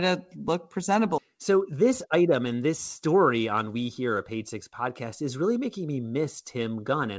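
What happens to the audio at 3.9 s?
At 3.9 s the speech carries on intact with no dropout, click or distortion, only the steady upper limit at 8 kHz that comes from the G.722 call path it travels through.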